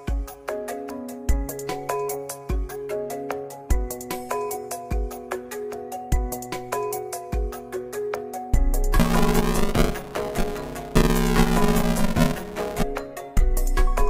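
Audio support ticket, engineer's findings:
Buffer tearing, 9.00–12.83 s: robotic 200 Hz rattle, present only with signal. Writer and hardware read pointers slipped. Most of each 5 ms period replays audio about 10 ms old. Waveform shows hard joins every 5 ms. Spectrogram shows a 200 Hz harmonic comb.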